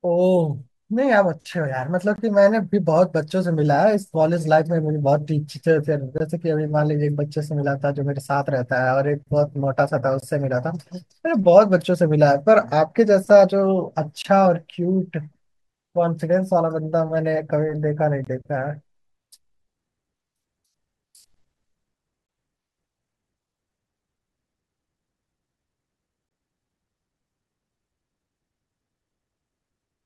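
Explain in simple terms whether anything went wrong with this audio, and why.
The speech drops out in brief, hard-edged silent holes, about 21 ms each, at 2.16, 6.18, 10.20, 14.22, 18.25, 22.27 and 26.29 s. This is a gap between chunks: the audio travelled in 4-second pieces, and silence was left at each join.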